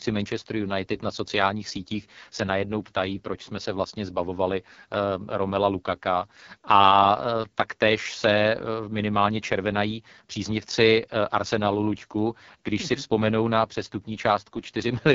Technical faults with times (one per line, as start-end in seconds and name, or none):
0.00-15.15 AMR wideband (HD Voice) codec